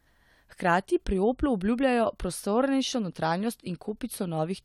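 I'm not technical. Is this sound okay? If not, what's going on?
Yes, nothing in this speech recording points to a technical problem with the sound signal.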